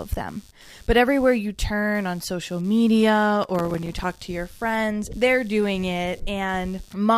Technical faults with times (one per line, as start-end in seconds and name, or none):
0.00-7.18 computer activity noise
3.44-4.19 processor overload crackle